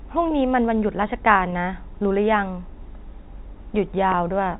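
Two brief dropouts at 1.50 to 1.52 s and 4.12 to 4.14 s show packet loss with pitch repetition. Each 20 ms gap, which fits a single lost packet, gets patched by looping the last pitch period, so the speech briefly sounds held and a bit buzzy under the narrowband G.711 telephone sound.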